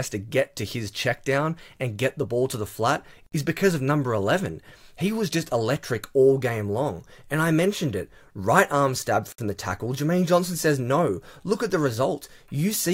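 At 3.26 s the sound drops out for about 58 ms, then again at 9.32 s for about 60 ms, six seconds apart. That's a gap at a join of encoded pieces: separately encoded chunks glued together untrimmed, so encoder delay and end padding leave short, smeared silences before the sound resumes.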